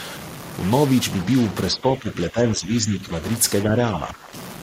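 A stuck bit runs through the whole of this speech recording, heard as distortion riding on the voice, with the pauses filled by a steady noise floor. The likely cause is one data bit held permanently at 0 or 1 by a broken line or converter, so roughly half the sample values are pushed off by that bit's weight. Speech suppressed in double talk appears from 1.70 to 3.14 s and again from 3.64 to 4.33 s, where the voice sinks by around 10 dB. This is likely an echo canceller that could not tell the near talker from loudspeaker echo while both sides spoke, and so pulled both down.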